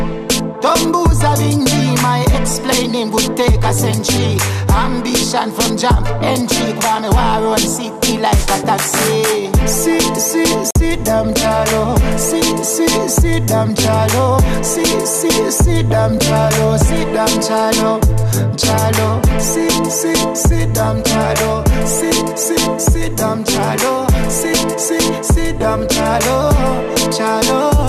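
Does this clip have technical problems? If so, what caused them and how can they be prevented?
Yes: a digital broadcast dropout from 10.71 to 10.76 s, where the receiver muted for about 48 ms after losing frames, consistent with two frames, so that sound is gone. Stronger reception, better antenna placement or more robust error correction would prevent it.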